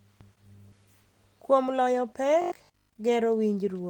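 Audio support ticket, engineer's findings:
Jitter buffer speed-up, 1.42–2.01 s: speech runs about 10% fast at unchanged pitch, around 70 ms of pitch periods trimmed repeatedly to drain excess buffered audio.

Robotic sound from repeated short buffers, 2.42–2.94 s: rigid 50 Hz metallic buzz over most of the span, likely receiver repeating 20 ms buffers while new audio arrives late.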